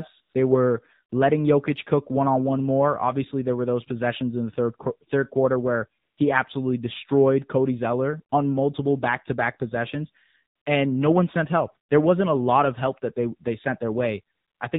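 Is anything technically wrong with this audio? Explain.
Yes. The whole 15-second speech recording carries AMR narrowband mobile codec damage, and there are four short AMR comfort noise gaps.

AMR narrowband mobile codec: Throughout, the speech is confined below 4 kHz and has a plainly audible buzzy, synthetic edge. AMR-NB samples at 8 kHz and rebuilds each 20 ms frame from a vocal-tract filter excited by a handful of pulses. The degree of coarseness fits one of the lower modes, around 7.4 kbps, where that excitation is too sparse to carry natural texture.

AMR comfort noise: At 0.22–0.34 s (120 ms), 6.02–6.18 s (160 ms), 10.56–10.66 s (100 ms) and 14.36–14.60 s (240 ms), the real background drops out and is replaced by smooth, steady noise. During each span, the sender classified the signal as silence and stopped transmitting speech frames. The receiver filled the gap with synthetic noise built from a rough level and spectrum description, so the change in background is audible at both ends of each span.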